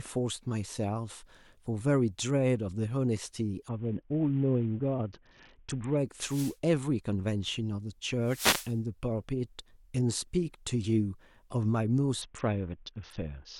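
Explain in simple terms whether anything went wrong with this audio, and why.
Yes, two different faults can be heard in this speech recording.

The first is a Bluetooth SBC bit pool drop, from 3.7 to 6.0 seconds and again from 12.2 seconds to the end. Bluetooth squeezes sound into small packets. When the wireless link gets crowded, the phone sends far less data so the sound keeps playing. The highest tones get almost nothing, so the voice turns dull and muffled, with a gritty, rough noise on top. The drop sounds steep, far below normal quality.

The second is a wireless microphone noise hit, at 6.2 to 6.6 seconds and 8.2 to 8.8 seconds. A radio microphone's signal can fade for a moment when reflected radio waves cancel each other out. The receiver's own hiss then briefly rises. Each one is a short swish or burst of static, well under a second long.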